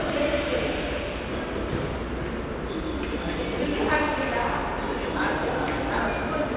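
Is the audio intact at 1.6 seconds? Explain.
Yes, the sound is intact at 1.6 seconds, with no dropout, click, distortion or other fault at that moment.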